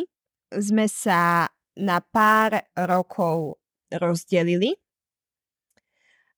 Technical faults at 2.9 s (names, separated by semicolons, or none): sample clock jitter